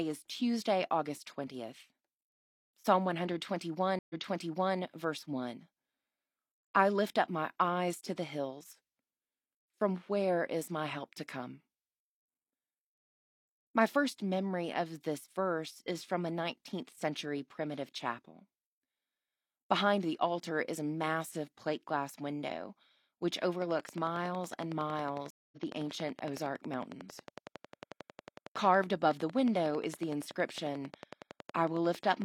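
Stream reconnects at 3.99 to 4.78 s and 25.30 to 25.58 s break up this speech clip: the connection dropped, playback went silent, and a fresh decoder picked the stream up again mid-flow. At 3.99 s the gap is about 0.11 s and the audio resumes 0.68 s earlier, so a stretch of speech repeats, as when a server resends a burst. At 25.30 s the silence lasts 0.22 s and playback rejoins roughly 0.15 s later, so a sliver is skipped. A train of clicks starts at 23.62 s, right after "plate glass window which", and runs to 32.23 s. It is a regular ticking at 10.9 clicks per second, around a hundred similar pulses peaking some 10 dB above the speech and audible in pauses as well. A repetitive external pulse source, likely electrical interference from nearby equipment or a faulty connection or power supply, is injecting it.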